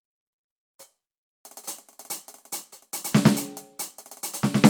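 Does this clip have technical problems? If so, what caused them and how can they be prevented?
No, this music clip shows no audible technical fault, so there is nothing here that needs a cause traced or a fix applied.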